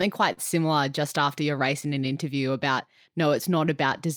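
Underneath the whole clip there's clock drift between sender and receiver: the sending side's clock runs a few percent slow compared with the receiving end. The receiver's buffer keeps running short, so it has to pad the audio to keep going. That gives the speech a faintly uneven pace all the way through, with small timing hiccups that come at irregular spacing.

The first clear one is a short stall from a late packet, from 0.33 to 0.40 s, just before "similar just after your". A packet turned up late, the buffer ran dry, and the receiver held the last bit of sound for 46 ms until the data arrived. Then it picked up exactly where it left off, so nothing is lost. You just hear a sound hang on a touch too long, with a slight buzzy dip.

From 2.14 to 3.88 s you get repeated timing corrections. The receiver keeps slipping in small repeated slices to stay in step with the slower sender, so playback runs at about 98% speed and adds around 40 ms over that stretch. 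The edits all push the same way but land unevenly, so the rhythm feels a little wobbly and draggy rather than broken by any single obvious glitch.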